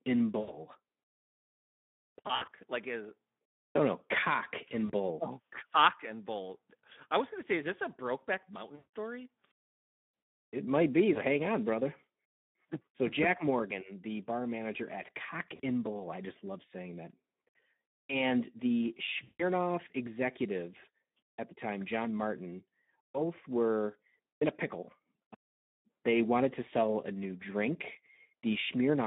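Speech heard through the Speex codec over a line limited to roughly 150 Hz to 3.6 kHz, and the coding damage is plainly audible. The voice sounds hoarse and grainy because too few bits describe the excitation, which fits a setting around 11 kbps. This texture is CELP starvation rather than band-limiting alone, since a clean narrowband line would sound dull but not rough. VoIP packet loss concealed by the speech codec occurs at 0.39–0.64 s, 2.27–2.50 s, 4.85–4.91 s, 8.75–8.91 s, 11.13–11.21 s (between "might be" and "on brother"), 15.55–15.60 s, and 19.23–19.44 s (just before "executive at the time"). Each gap covers about 20 to 180 ms of missing audio. Unlike plain dropouts, these gaps are not silent. The decoder stretches the last sound into a buzzy tone or coloured noise that fades, and the voice stays weak briefly after packets resume.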